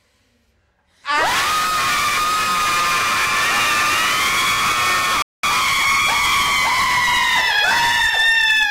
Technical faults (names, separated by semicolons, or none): playback stall